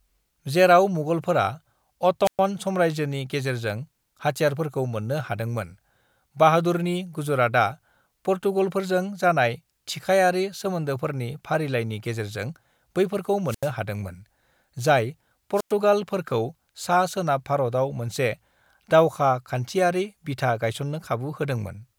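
At 2.24 s the speech breaks up in a wireless microphone squelch dropout lasting until 2.40 s. Hiss swells briefly, then the output mutes for about 115 ms. The radio link from the transmitter has faded too far. The receiver's squelch closes, cutting the signal to near silence, then reopens as reception recovers. The same thing happens at 13.46 to 13.71 s, with a mute of 83 ms. It happens again at 15.55 to 15.73 s, muting for 100 ms.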